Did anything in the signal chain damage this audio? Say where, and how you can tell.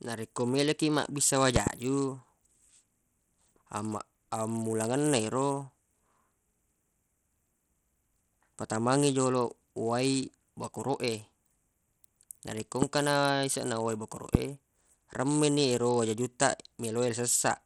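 Yes. Codec stage: the speech sounds gritty, with flickering treble, throughout, and a spectrogram shows a hard ceiling at 17.9 kHz, likely Bluetooth SBC compression with a starved bit pool.

Analogue or driver stage: loud pops about 20 dB over the speech at 1.56–1.69 s (a double), 12.82 s and 14.35 s show as tall waveform spikes, likely electrical glitches.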